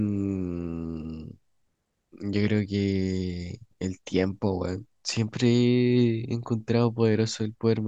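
A speech recording, with nothing technically wrong with it.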